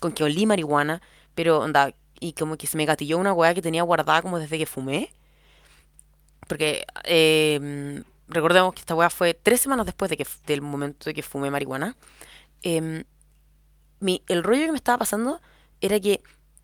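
No technical faults can be heard anywhere in the recording. The speech runs on without a single event that needs to be placed in time.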